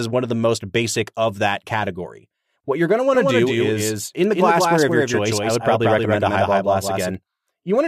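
From 3.15 s, after "you're going to want", a doubled audio track begins: a full-band copy around 200 ms behind at roughly equal level, likely from a slower second capture or an out-of-step edit. Spectrogram and waveform repeat each syllable undecayed, stopping abruptly at 7.15 s.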